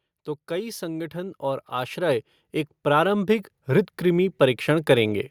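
An automatic gain control judged the input too quiet and raised its gain twice, by about 8 dB each time: from 0.47 to 2.32 s, then again from 2.83 to 5.26 s. In both stretches the speech and the background swell together, slowly, rather than jumping.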